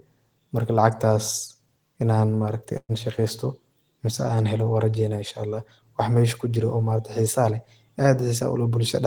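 At 2.77 to 2.92 s a held, fading tone replaces the speech just before "shaqeyso mase an helo": a burst of packet loss, concealed, with 120 ms missing.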